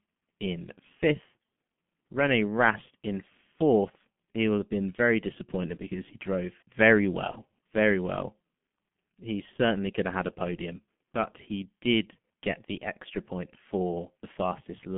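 From start to end the speech carries G.723.1 codec damage, and it is heavy. The band stops near 150 Hz and 3.4 kHz, and the rate is near 6 kbit/s. Unlike plain telephone filtering, the slow 30 ms model updates add hoarseness and smear consonants.

From 7.31 to 7.37 s, VoIP packet loss concealed by the speech codec appears. The decoder stretched its last pitch and filter into a short, fading sound, consistent with one lost 30 ms frame, then recovered weakly. A dropout would leave silence rather than this sound.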